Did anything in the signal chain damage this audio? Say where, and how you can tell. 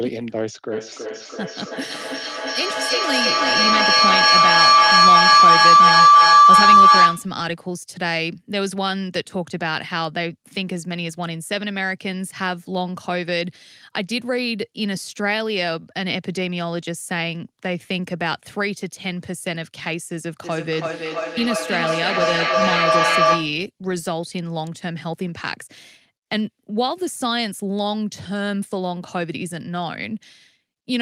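Yes. In call processing, a feedback howl runs from 0.72 to 7.4 s: two devices in one room feed each other, the loop gains on every pass, and a tone near 1 kHz swells to about 13 dB above the speech, with the loop coming round roughly every 300 ms.

Feedback echo between two devices appears from 20.43 to 23.67 s, again a call-processing loop. Each device's echo canceller ignores the other's playback, so the sound returns at about 300 ms intervals, thinner and more ringing, peaking around 6 dB above the speech.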